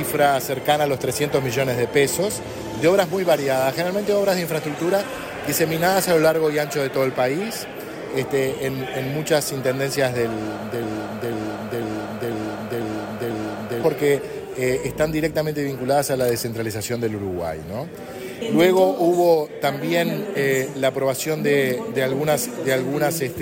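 At 10.83 s the audio catches on a fragment of about half a second (496 ms) and replays it exactly, back to back, six times until 13.83 s, like a stuck record. Whatever should have played across those three seconds never arrives. This broken-record loop likely comes from the player, encoder or stream stalling and resending the last chunk it held, so the repeated piece stands in for the missing audio rather than delaying it.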